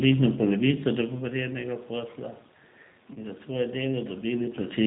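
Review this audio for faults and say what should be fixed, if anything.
The whole clip carries the sound of the G.729 codec, and the damage is plainly audible. The speech is band-limited with nothing above 4 kHz, and has a rough, slightly synthetic texture because the decoder rebuilds it from a vocal tract filter, a pitch predictor and sparse pulses rather than the waveform itself. The character points to the 8 kbit/s G.729A variant. To prevent it, negotiate a wideband codec such as G.722 or Opus where both endpoints support it.

VoIP packet loss concealed by the speech codec appears from 3.14 to 3.18 s. About 20 ms of audio went missing, which fits a single lost packet. The decoder filled the gap by extrapolating its last pitch and filter state with falling gain, giving a brief stretched, fading sound. Because each frame depends on the previous one, the distortion carries on after the gap until the decoder resynchronises. 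To prevent it, fix loss on the network path with QoS marking and an adequate jitter buffer, or add forward error correction.

The level changes near 0.5 s and 4 s come from the talker moving relative to the microphone, and the background room noise is part of the recording.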